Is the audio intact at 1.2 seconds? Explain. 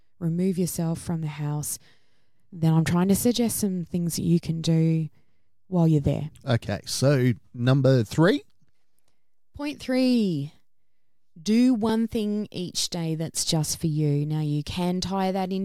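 No. At 1.23 s the speech jumps ahead, skipping about 30 ms. The likely cause is a dropped buffer (overrun): samples were overwritten before being read.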